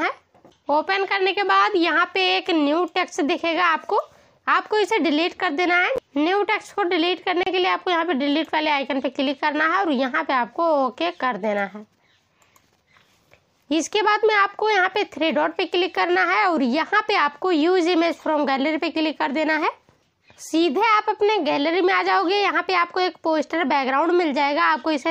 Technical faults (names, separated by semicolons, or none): gap between stream segments